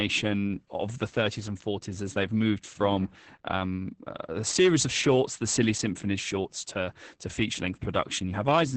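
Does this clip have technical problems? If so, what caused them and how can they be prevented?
Yes: Opus voice compression throughout leaves the speech muffled, hoarse and slightly robotic, with nothing above 8.7 kHz, which fits a low-bitrate wideband SILK mode near 10 kbps. Prevent it by encoding at a higher bitrate.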